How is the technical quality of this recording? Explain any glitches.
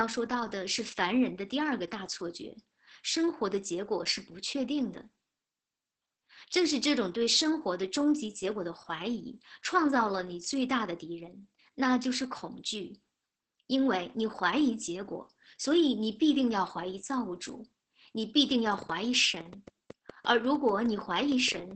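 The recording's technical quality is poor: heavy codec damage runs through the whole speech clip, and a burst of clicks appears near the end.

Opus voice compression, throughout: the speech sounds muffled, hoarse and slightly robotic, with nothing above 9 kHz. The codec, in its SILK linear-prediction mode at about 10 kbps with wideband bandwidth, lacks the bits to code the excitation finely and drops the upper band.

Train of clicks, from 18.52 s to 21.72 s: about twenty sharp ticks, roughly 6.3 per second at uneven spacing and peaking around 5 dB above the speech, are audible in pauses too. The cause is likely interference from nearby equipment or a faulty connection or power supply injecting repeated pulses.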